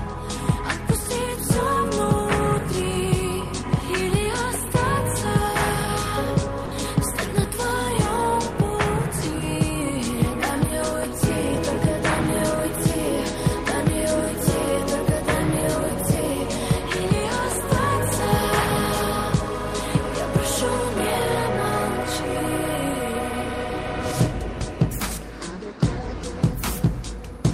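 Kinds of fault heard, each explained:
Sound dropped by the voice detector: at 6.65 s, 60 ms of sound turns to steady noise or near silence, likely because it was misjudged as background.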